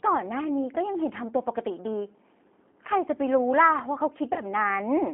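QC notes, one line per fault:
Throughout: G.729 codec. The speech is confined to a 250 Hz to 3.4 kHz band and sounds plainly rough and synthetic, because a low-rate vocal tract and pulse model rebuilds it. This fits an 8 kbit/s G.729A stream.
2.72–2.74 s and 4.33–4.41 s: VoIP packet loss concealed by the speech codec. The decoder extrapolates the last pitch and filter, producing a brief, fading smear. The gaps suggest one lost 10 ms frame, then three (about 30 ms).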